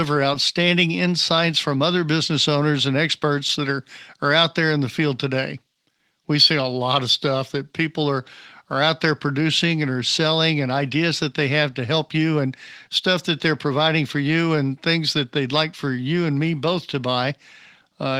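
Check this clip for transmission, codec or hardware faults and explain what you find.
No faults found here.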